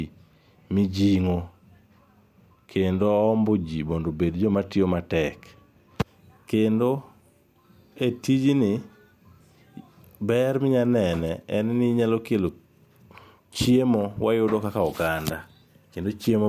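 Speech recording with no audible technical faults.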